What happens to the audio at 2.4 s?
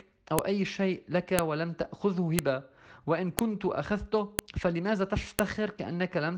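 At 2.39 s there is a sharp, loud click. It is a file header played as audio. Two pieces of the file were joined without removing the WAV header, so its few dozen bytes play as samples. They form a brief snap that ignores the surrounding sound.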